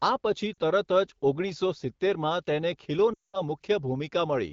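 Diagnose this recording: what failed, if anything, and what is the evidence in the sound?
Lost AMR speech frames, at the network stage. Just after "આ પછી", 0.54 to 0.58 s brings a brief 40 ms dip. From 3.13 to 3.41 s the sound drops to near silence. The AMR-WB decoder reused its last good settings with falling gain.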